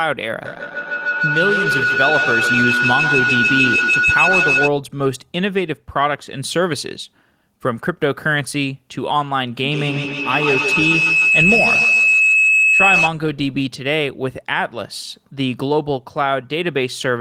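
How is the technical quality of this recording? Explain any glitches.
The recording is compromised by feedback howl twice, from 0.45 to 4.74 s and from 9.64 to 13.14 s. A microphone-to-loudspeaker loop gains level on each pass, so repeats build rather than decay. They narrow into a tone near 1.5 kHz, then near 3 kHz, pulsing roughly every 150 ms and peaking about 2 and 4 dB above the speech.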